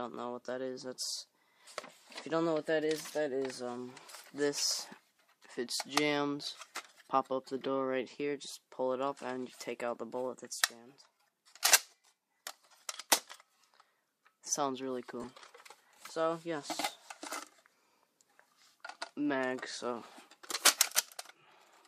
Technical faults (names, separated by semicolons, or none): lost LE Audio frames